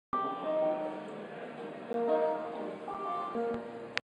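At 1.93 s and again at 2.94 s the sound drops out abruptly for about 12 ms and then about 7 ms. This is a gap between stream segments: consecutive 1-second segments carry time stamps that don't meet, so the player pads the shortfall with silence. Nothing is lost, but playback is stretched. It is heard as a tiny hard tick or stutter. On a waveform each appears as a flat, square-edged hole; on a spectrogram, a thin vertical blank band across all frequencies, one second apart.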